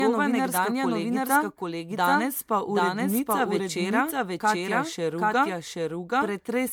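From the start of the speech to the end, a doubled audio track runs underneath: a full-band copy at roughly equal level trails the original by around 0.7 s, dry and without room colour. This is likely a second capture through a slower path, or an edit holding two copies out of step.

Throughout, the speech also shows generation loss: a swirly, hollow, smeared quality with blurred consonant attacks, worse than a single MP3 pass at 128 kbit/s would give. The likely cause is repeated MP3 re-encoding, around seven passes, with each pass adding fresh quantisation noise and spectral holes.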